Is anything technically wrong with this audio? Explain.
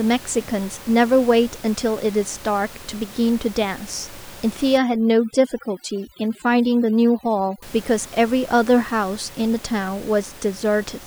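Yes. Overdone noise removal, 4.78 to 7.62 s: an aggressive reducer shuts off bands near its noise estimate, leaving twinkling near-silence between phrases, where the room noise, about 20 dB below speech, otherwise sits.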